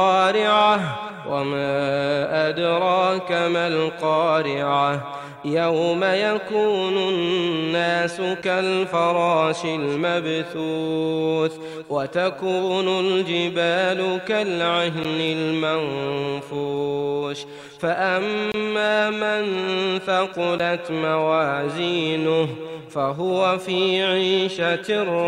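The output buffer was probably not filled in time four times, so blocks of samples were written as zeros, leaving a block of digital silence each time. Each dropout starts and stops with no fade. Short ones at 8.42 s (8.3 ms), 15.04 s and 20.58 s (11.6 ms each, which fits a 512-sample buffer) sound like ticks. A longer 23 ms gap from 18.52 to 18.54 s, twice that block length, is heard as a brief hole.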